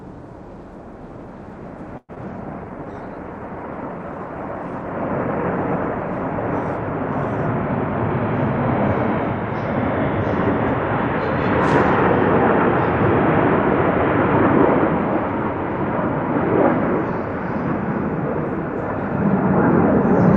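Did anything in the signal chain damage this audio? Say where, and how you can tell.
Yes. The damage comes from the call's network path and codec, in four linked events.

Call audio freeze, at 1.97 to 2.11 s: the sound is stretched into a fading continuation for about 114 ms, ending in roughly 30 ms of silence, then resumes with nothing lost. Packets were likely held up until the jitter buffer emptied. Unlike packet loss, it inserts a gap rather than removing audio.

Short concealed packet loss, at 2.15 to 2.18 s: a brief smear where 40 ms of real audio never arrived and only 15 ms was synthesised to cover it. The timeline pulls forward by roughly 30 ms. Unlike the freeze, material is actually missing here.

Jitter buffer slow-down, from 2.29 to 2.93 s: the sound plays at 95% speed but keeps its pitch, with about 41 ms added by repeating short periods, giving a drawn-out quality. A tape or clock speed error would drop the pitch as well.

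Call bitrate drop, from 2.37 to 9.92 s: the encoder falls from 128 to 25 kbps, staying at the lowest rate for about 3.9 s. The bandwidth narrows from 20 kHz to 12 kHz. Coarse coding comes with the dulling, which separates this from a simple low-pass filter.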